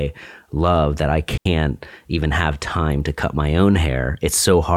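Speech with a digital wireless dropout from 1.37 to 1.46 s, right after "love that I": the receiver mutes for about 83 ms with a very short fade, leaving a clean hole. An analogue wireless dropout would bring a burst of hiss or static instead.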